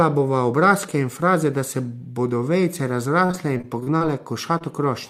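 From 3.25 to 4.02 s, packets went missing again and again, with the longest hole about 38 ms. The receiver patched each one, roughly a quarter of that span, giving choppy, robotic repeated packet loss. At 4.58 to 4.62 s, a short concealed packet loss: about 20 ms never arrived and was filled from the preceding sound, leaving a brief smear.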